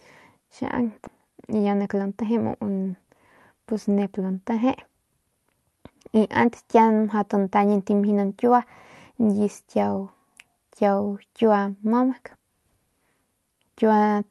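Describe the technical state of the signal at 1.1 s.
Around 1.07 to 1.09 s the speech has a skip ahead: roughly 0.7 s of audio never plays, most likely because the jitter buffer overflowed and discarded queued audio so playback could catch up. The two sides are butted together with no silence and no concealment fill, so the sound lurches forward. That seamless splice is what separates it from a dropout, which leaves an audible gap. The audio passed through an Opus call path, which limits its bandwidth to about 12 kHz.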